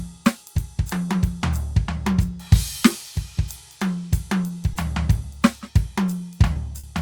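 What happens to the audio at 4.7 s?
At 4.73 to 4.77 s there's a short concealed packet loss. About 20 ms of the music never arrived in time, so the receiver stretched the preceding sound to cover the gap and then blended back in, leaving a quick smear or wobble.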